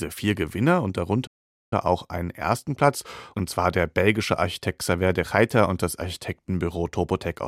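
A speech clip with a playback stall: the sound halts mid-flow at 1.26 s and stays silent until 1.73 s, resuming with "auch einen ersten". Unlike a brief dropout click, this is a clean, near half-second gap, likely from the player running short of data.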